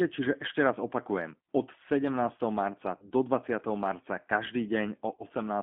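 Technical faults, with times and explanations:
Throughout: G.729 codec. The speech is confined to a telephone band of about 200 Hz to 3.5 kHz. It has the rough, slightly synthetic grain of a coder that rebuilds each 10 ms frame from a vocal tract filter, a pitch predictor and a few pulses, which fits an 8 kbit/s G.729A stream. Plain band-limiting would only muffle the speech. Here the texture itself is plainly damaged.
2.97–3.11 s and 5.15–5.23 s: VoIP packet loss concealed by the speech codec. Each event begins with about 40 ms of missing audio, which fits two lost 20 ms packets. The decoder fills that gap by extending its last pitch and filter state at falling gain, so the sound smears into a buzzy tone or coloured noise that fades instead of going silent. A clean dropout would leave a hard gap. Here the distortion lingers past the loss, because each rebuilt frame depends on the one before.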